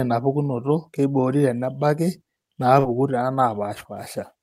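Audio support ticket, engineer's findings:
Brief smear with wobble at 2.79 to 2.85 s, a short sound possibly swallowed. Short concealed packet loss: about 40 ms of speech arrived too late for the decoder, and the receiver's concealment stage extrapolated the preceding sound for roughly 36 ms, then cross-faded back into real audio. Probable component: network jitter or loss on the receive path.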